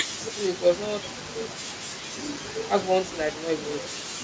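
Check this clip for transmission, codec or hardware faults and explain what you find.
One hardware fault stands out in the speech, which also carries call microphone processing that leaves nothing above 8 kHz.

From 2.31 to 2.45 s there is loose connector crackle. A worn contact repeatedly breaks and remakes the circuit, chopping the signal into an irregular scratchy burst. Unlike a packet-loss dropout, it is ragged and noisy rather than a clean silent gap.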